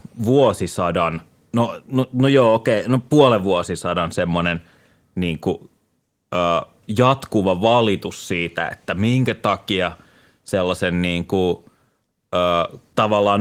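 Nothing stood out on listening to this speech recording, which carries the light, steady character of Opus voice compression at 24 kbps throughout.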